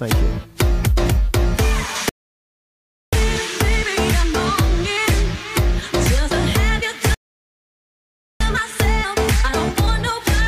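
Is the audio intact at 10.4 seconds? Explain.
Yes, the audio is intact at 10.4 seconds, with no dropout, click, distortion or other fault to be heard at that point.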